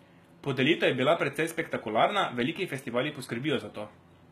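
Right from the start and all the way through, the speech carries what sounds like HE-AAC compression at a low rate, around 20 kbps. The upper range is likely rebuilt by band replication rather than coded, so the s sounds come out gritty and lispy, and nothing survives above about 14.9 kHz.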